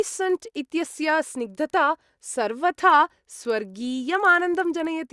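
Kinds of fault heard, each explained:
Resampler restarted on every block: the 48 kHz to 24 kHz conversion was run on each 50 ms block in isolation, so every block edge picks up a small error from missing neighbours, giving a steady 20 Hz ticking buzz that rides on the speech throughout and drops away in gaps.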